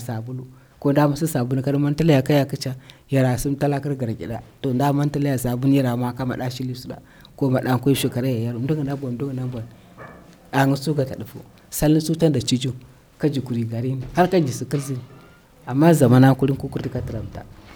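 No technical faults can be heard anywhere in the speech.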